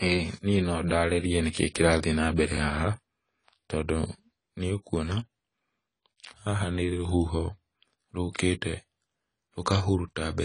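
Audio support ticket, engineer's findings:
Low-bitrate audio saved at a high bitrate, throughout the speech. Likely an AAC-LC stream near 24 kbit/s re-encoded to MP3 around 261 kbit/s. Nothing above 10 kHz; first-pass codec artefacts retained, high bitrate adds size only, restores nothing.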